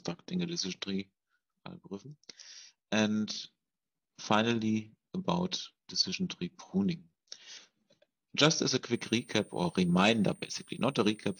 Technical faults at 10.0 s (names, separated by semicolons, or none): switching supply whistle